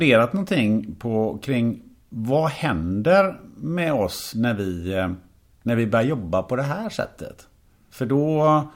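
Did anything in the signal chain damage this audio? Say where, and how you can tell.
No, nothing in the chain audibly damaged this speech recording at any stage.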